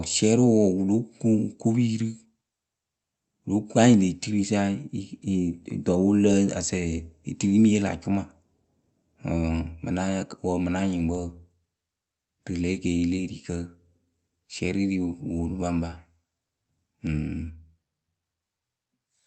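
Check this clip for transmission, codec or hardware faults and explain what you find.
Nothing here points to a transmission, codec or hardware problem; the speech just comes through an ordinary call connection the way it should.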